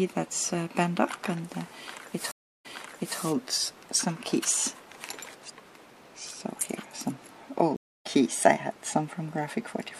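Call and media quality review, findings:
Stream reconnect, 2.31–3.19 s: dropout of 0.33 s, then playback resumes 0.55 s earlier, so a short stretch repeats. Stream reconnect, 7.76–8.07 s: 0.29 s gap, resumes roughly 0.3 s later, so audio is skipped. Likely a player connection drop with a fresh decoder started mid-stream.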